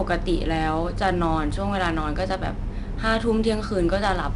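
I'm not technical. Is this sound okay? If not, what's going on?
No. The whole recording was squeezed with 4-bit ADPCM compression, which stores each sample as a small, coarse step guessed from the one before. That leaves a gritty hiss on every loud syllable, and nothing above 10.6 kHz, so the speech sounds dull.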